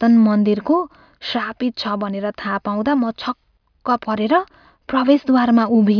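No technical faults can be heard anywhere in the recording, and the signal stays steady and continuous throughout.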